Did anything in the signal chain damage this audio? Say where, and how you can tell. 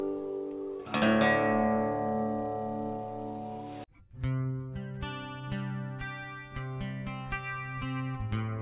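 No, no signal-chain damage audible.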